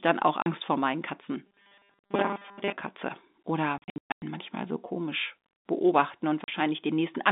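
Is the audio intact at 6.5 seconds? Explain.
No. Lost packets replaced by silence (packet loss filled with silence) leave a 40 ms hole at 6.44–6.48 s: a flat waveform, a blank spectrogram column, and hard edges.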